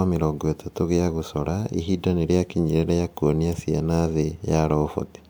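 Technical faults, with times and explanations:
There are no technical faults in this speech clip, so there are no times or explanations to give.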